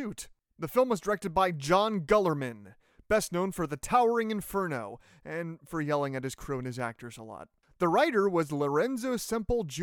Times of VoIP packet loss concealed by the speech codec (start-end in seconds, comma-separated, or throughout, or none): none